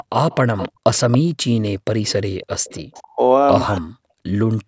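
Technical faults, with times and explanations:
0.31–1.18 s and 2.07–3.00 s, echo leak: a copy of the speech returns 278 ms late, roughly 10 then 15 dB down, likely loudspeaker sound the far-end canceller missed.
0.70–0.84 s and 2.29–2.41 s, background gated by the echo canceller: room sound drops about 40 dB, then about 13 dB, as the canceller clamps the microphone during playback.
2.89–3.20 s and 3.79–3.99 s, speech suppressed in double talk: the talker's voice cuts out almost completely, likely because overlapping talk made the canceller duck everything.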